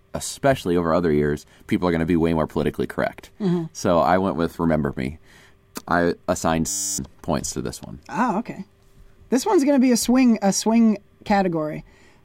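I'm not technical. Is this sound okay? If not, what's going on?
No, at 6.69 to 6.98 s there's a system hang loop: the computer froze and replayed one 10 ms scrap, giving a buzz at 100 Hz while about a third of a second of speech went missing.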